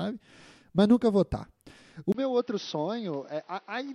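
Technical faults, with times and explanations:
2.12 to 3.94 s, input switched to a poorer device: after a brief gap of about 20 ms, the speech turns dull and boxy to the end, with nothing above 6 kHz, a drop of roughly 10 dB in level, and a new background noise sitting around 30 dB below the speech. The likely cause is the system changing its input mid-recording to a narrower-band microphone or headset call profile, which brings its own tone, gain and noise floor.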